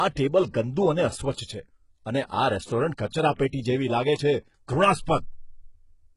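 Throughout the speech, s sounds come out gritty, lispy and metallic, likely from heavy HE-AAC compression at a bitrate around 12 kbps. The treble is copied up from lower bands, not coded. A spectrogram shows blocky, repeated texture up top and nothing above 11.1 kHz.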